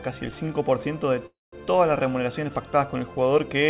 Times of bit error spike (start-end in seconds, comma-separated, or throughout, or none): none